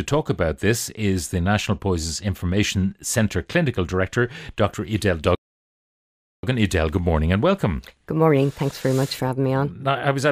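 Channel delay with comb filtering runs from 3.66 to 4.67 s. One channel arrives later than the other by only about one sample, roughly 0.02 ms, and when the two are folded to mono the shared content cancels at regularly spaced frequencies. With so small an offset the first notch sits near 20 kHz, so the speech loses some air and sparkle at the very top rather than sounding strongly hollow.

A playback stall follows from 5.35 to 6.43 s, a gap of about 1.08 s in which the speech simply stops mid-flow and the output falls silent before resuming. Such a dropout most likely comes from the player running short of data or its audio thread being blocked, so nothing is sent to the output until it recovers.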